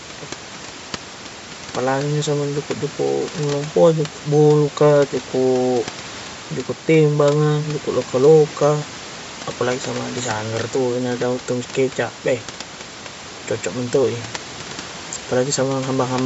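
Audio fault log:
throughout: Bluetooth LC3 compression. The speech carries a plainly audible breathy, grainy edge. The likely cause is a transform codec that zeroes parts of the upper spectrum and fills them with noise. The sound fits a 48 kbps stream using 10 ms frames.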